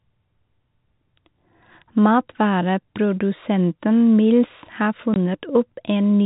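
At 5.14 s the speech drops out completely until 5.16 s. This is packet loss filled with silence. One block of audio never arrived, and the receiver played nothing in its place. The gap lasts 20 ms, which fits a single lost 20 ms packet. The sound cuts off abruptly and returns just as abruptly. Throughout, the G.711 telephone coding limits the audio to below 4 kHz.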